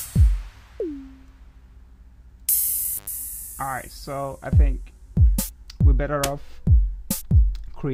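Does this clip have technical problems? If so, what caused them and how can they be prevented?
Yes. An intermittent contact cuts the sound from 2.98 to 3.07 s, about 88 ms, as a loose cable or plug briefly opens. Crackle at both edges and faint hiss in the gap set it apart from a clean digital dropout. Secure and inspect connectors before recording.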